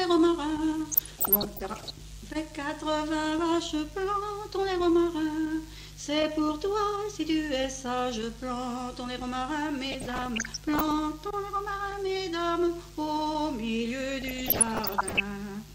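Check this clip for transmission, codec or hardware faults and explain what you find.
DAB burbling occurs three times, from 0.90 to 1.90 s, 9.92 to 10.91 s and 14.21 to 15.20 s. Weak reception let bit errors, somewhere under one percent, slip past error correction into the MP2 stream. Corrupted samples then put short blips of noise into individual sub-bands, and corrupted scale factors make sub-bands lurch in level for up to a frame. Each second-long stretch adds burbling blips of noise riding over the sound.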